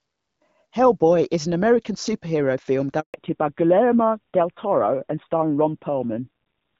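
At 3.00 s a handover gap cuts the speech. The signal decays within a few tens of milliseconds and stays silent for 140 ms, until 3.14 s, because no frames reached the receiver while the call moved between networks. Anything said in that interval is lost.

From 3.14 s to the end, a fallback to narrowband follows the switch. Before it, the HD Voice coding fits AMR-WB at 12.65 kbit/s. Afterwards nothing above 4 kHz remains, and the duller, rougher sound fits AMR narrowband at around 7.4 kbit/s.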